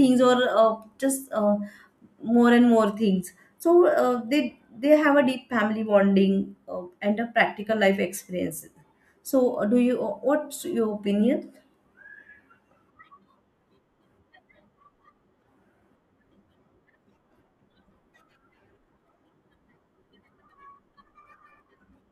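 Listening to the speech recording, nothing stood out as a technical problem at any point.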